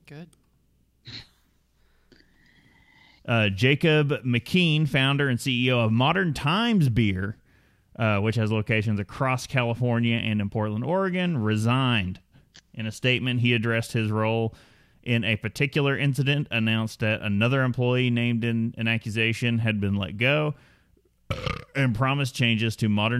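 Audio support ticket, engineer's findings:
Speech signal checked throughout, with no audible technical faults found and no component implicated.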